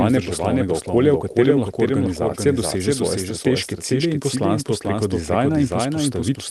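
Throughout the speech a second full-band copy trails the original by about half a second, roughly 5 dB quieter, dry and without decay, most likely a doubled audio track from a second capture path. Clock drift between sender and receiver is also present across the whole clip, with the sender running around 4 percent fast, so the receiver's jitter buffer keeps overfilling. From 0.14 s to 6.37 s this produces repeated timing corrections at 104 percent speed. The receiver keeps trimming short pieces at uneven intervals. The high end stops near 12 kHz, consistent with an Opus call path.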